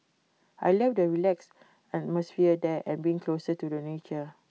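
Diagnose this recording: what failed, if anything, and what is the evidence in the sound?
Nothing failed here: the speech comes through a working call path, and the absence of content above 8 kHz is just the normal band limit of a wideband codec such as G.722.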